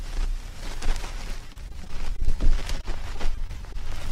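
Two stretches of repeated packet loss give the audio a choppy, robotic texture: 1.47–2.38 s, with about a fifth of the span patched and holes up to 33 ms, and 2.78–3.76 s, lighter at about a tenth, gaps up to 21 ms, each hole filled by extending preceding sound.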